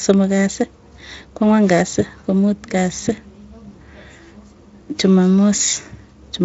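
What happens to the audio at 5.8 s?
Nothing goes wrong at 5.8 s; the speech there is intact, carried through the Speex codec with at most faint damage.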